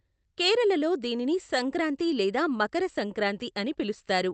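Speech, and it's been through an Opus call path at around 32 kbps with the top end cut off near 8 kHz, so you get that band-limited call sound plus the usual coding noise. The real problem is clock drift between sender and receiver: the sender's clock is running about 2% slow compared to the receiver's, so the jitter buffer keeps draining instead of holding steady. To avoid running dry, the receiver has to keep patching in extra material, and that happens all the way through the clip instead of at one spot.

You can hear it as repeated timing corrections from about 0.26 s to 4.26 s. The receiver keeps repeating short slivers of audio, always stretching, never trimming, so the speech plays back at roughly 98% speed and gains something like 70 ms overall. Each repeat is tiny and they're unevenly spaced, so instead of obvious glitches you hear, if anything, slight hiccups or a slightly uneven, dragging tempo.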